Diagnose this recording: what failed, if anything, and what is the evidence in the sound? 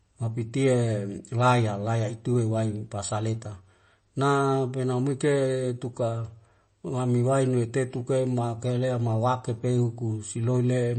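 Throughout the speech the sound is watery and swirly, with sibilants smeared and metallic, and nothing above 8.3 kHz. This points to the codec stage, likely MP3 compression at a low bitrate near 33 kbps: starved of bits, the encoder cuts the treble and drops weak frequency lines frame to frame.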